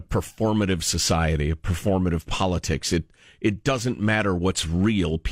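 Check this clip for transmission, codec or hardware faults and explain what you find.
There is one fault, DAB burbling, from 0.88 to 0.93 s. Bit errors around a tenth of a percent slipped past error correction and corrupted the MP2 audio data, putting short blips of noise in single sub-bands. It burbles briefly, and the spectrogram shows blocky, band-limited bursts.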